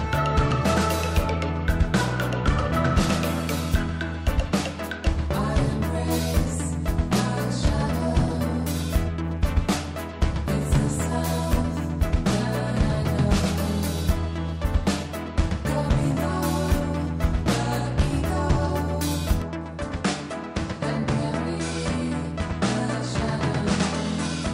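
Input switched to a poorer device at 19.42 s, to the end: the band abruptly stops near 10.1 kHz with a faint new hiss, level unchanged, likely from a different microphone.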